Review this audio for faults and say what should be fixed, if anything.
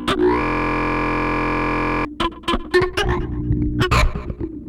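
A system hang loop runs from 0.42 s to 2.05 s. A 23.22 ms slice of sound repeats exactly about 70 times while the system is frozen, giving a steady buzz at 43.1 Hz. That length fits a 1024-sample ring buffer being replayed. An underrun would instead leave gaps or clicks between fresh audio, but here every cycle is identical. Prevent it by having the driver mute or stop the output stream whenever the audio thread stalls.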